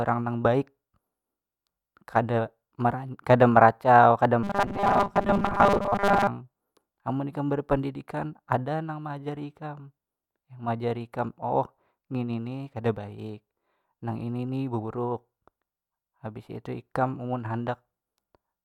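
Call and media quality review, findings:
Robotic sound from repeated short buffers, 4.43 to 6.27 s, after "meracau kada". Speech becomes a rigid metallic buzz at 200 Hz, fitting a 5 ms repeat. Likely cause: audio arriving too seldom, jitter buffer repeating frames. Most real audio is skipped.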